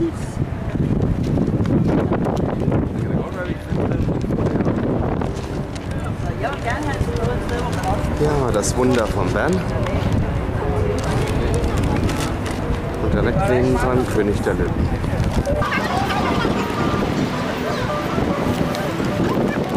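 From 15.62 s to the end, the audio suddenly turns shrill and rushed, as though fast-forwarded: everything moves at twice its proper pace and the pitch jumps up by around ten semitones, with the two shifts locked together. This is a section at the wrong speed. The final stretch was likely played back against the wrong clock, running at double speed, so timing and pitch both rise at once rather than either changing alone.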